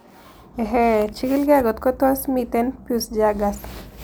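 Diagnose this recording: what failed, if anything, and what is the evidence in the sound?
Nothing failed; no fault is audible at any stage.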